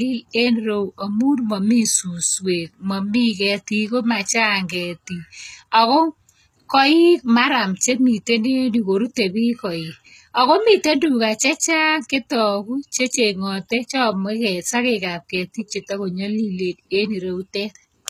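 From start to finish the speech has likely passed through HE-AAC compression at a low bitrate, with damage consistent with roughly 20 kbps. The codec kept only the lower spectrum and synthesised the treble by copying lower bands upward under a coarse envelope, so the top end sounds artificial, with nothing above 14.9 kHz. The damage is plainly audible: s sounds come out gritty and metallic, with a lispy edge.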